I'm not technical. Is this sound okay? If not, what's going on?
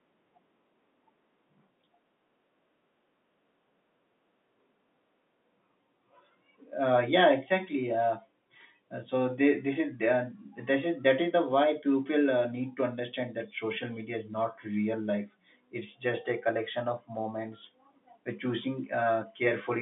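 No. From 18.35 s to the end at 19.81 s, a faint, steady chirping warble sits behind the speech, flicking between two pitches around 1 and 2 kHz. This is timecode bleed: a timing signal from a neighbouring cable or track leaking into the recording.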